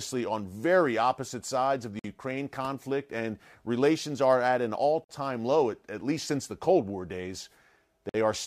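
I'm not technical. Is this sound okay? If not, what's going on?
No. The speech stops dead for about 50 ms three times, at 1.99 s (right after "opposite sides of the"), 5.04 s (between "are at an all" and "low at at least"), and 8.09 s. That's a gap between chunks: the audio arrived in 3-second pieces with silence left at each join.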